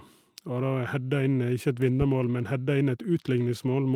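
At 0.83 to 0.85 s, and again at 1.75 to 1.77 s, a single network packet was lost. Each time the following packet carried a low-bitrate backup copy, which the decoder played in its place. This is a lost packet rebuilt from error correction. There is no dropout; instead, each 20 ms stretch sounds briefly coarser and grainier than the speech around it, a quick roughening rather than a gap.

From 2.02 to 2.11 s, a supply was switched on or off on a live microphone input, and the sudden voltage step passed through the input's coupling capacitors into the signal. The result is a phantom power thump: a deep, low-frequency knock that dies away quickly, decaying over about 20 ms, and stands apart from the speech as a dull physical bump.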